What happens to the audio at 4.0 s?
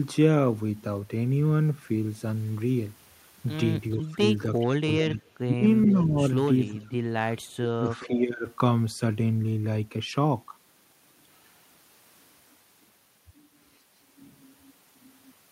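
Speech suppressed in double talk from 3.96 to 6.21 s, likely an echo canceller ducking both sides: the speech dips by about 30 dB for about a second in total, visible as waveform gaps and blanked spectrogram bands.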